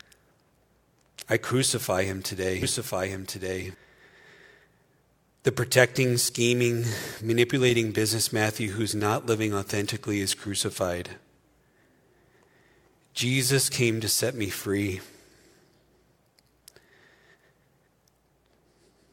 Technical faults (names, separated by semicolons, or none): doubled audio track